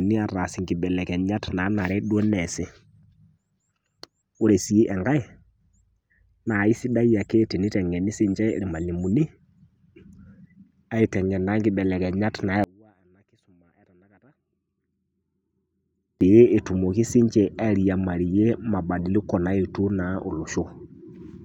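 A speech clip in which, from 12.64 to 16.21 s, just after "ateng'en naa ikibelekenyat", the speech almost disappears, dropping by about 33 dB and leaving only a faint residue before full level returns. The likely cause is one channel inverted: one stereo side has reversed polarity, so when the two are summed to mono the centred speech they share cancels, and only the small difference between the channels survives.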